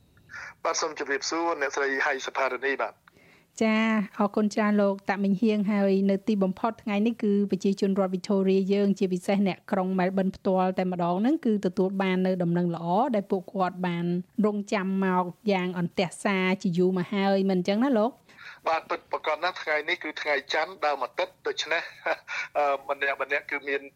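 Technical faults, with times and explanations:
No technical faults can be heard anywhere in the recording. Nothing in the audio calls for a time or an explanation.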